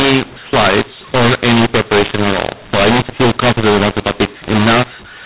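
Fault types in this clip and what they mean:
mu-law and A-law mixed up: From start to finish the speech sounds harsh and gritty, with levels scrambled so that some come out too large and others too small, and the pauses are filled with a noise floor where there should be near-silence. The cause is a law mismatch. The audio was encoded as A-law but decoded as mu-law, so every 8-bit code maps to the wrong level. That distorts the speech and lifts the quietest samples well above zero. The narrow band of under 4 kHz fits 8 kHz G.711 telephone coding.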